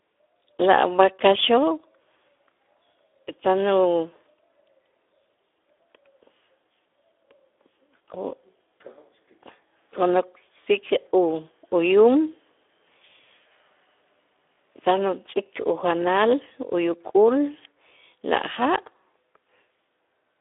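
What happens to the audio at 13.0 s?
At 13.0 s you're hearing the same Speex codec damage that runs through the whole clip. It's a CELP speech coder, and at the low setting this sounds like, around 11 kbps, it can't spend enough bits on the excitation, so the speech comes out grainy and hoarse in a plainly audible way. The band is also squeezed to a phone-like 300 Hz to 3.6 kHz, with nothing above 3.8 kHz.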